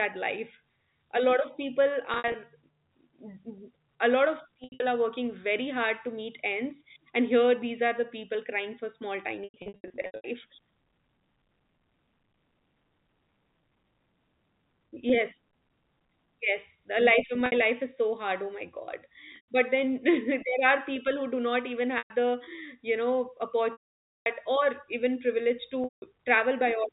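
Packet loss with pitch repetition strikes at 2.14 s after "lot of people", 4.64 s before "are working very hard", 9.44 to 10.24 s, 17.46 s, 19.32 s, 21.98 s after "who do not even", 23.72 to 24.26 s and 25.84 s. Lost packets are bridged by repeating the last pitch period, so short gaps sound held and buzzy. The half-second losses fade to silence. A spectrogram shows frozen, evenly spaced harmonics, and the waveform shows identical repeated cycles decaying, all within the 4 kHz telephone band of the G.711 link.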